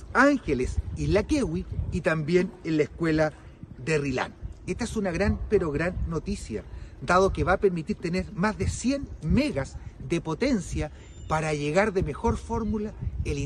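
No technical faults are audible anywhere in the recording.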